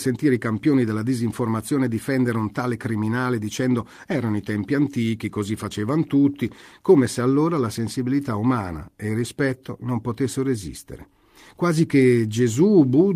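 Nothing goes wrong anywhere in this speech recording; there are no technical faults to point to at any moment.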